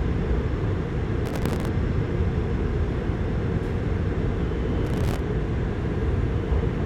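At 1.26 s a burst of processor overload crackle sets in and runs to 1.68 s, then returns from 4.85 s to 5.20 s. In each stretch the processing could not keep up, and buffers of roughly 3 ms were skipped outright, dozens of them close together, leaving hard-edged gaps that fuse into a gritty tearing over the sound. It differs from a single dropout because it is a dense, rapid texture that stops as soon as the load passes.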